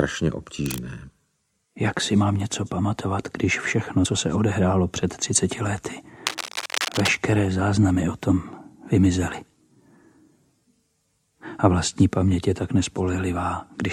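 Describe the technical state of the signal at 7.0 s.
At 7.0 s you're right inside a burst of cable scratch noise running from about 6.27 to 7.15 s. It's likely a worn cable or connector being moved, its contact resistance jumping around and throwing dense, uneven scratchy rustle over the sound, only a few dB under it.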